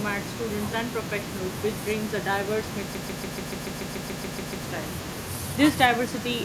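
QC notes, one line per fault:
throughout: echo with no canceller. A faint, thin copy trails each phrase by roughly 0.4 s, about 28 dB down, from far-end loudspeaker pickup returning uncancelled.
2.95 to 4.64 s: broken-record loop. A 143.5 ms fragment repeats back to back 12 times, replacing the audio due there, likely from a stalled stream resending its last buffer.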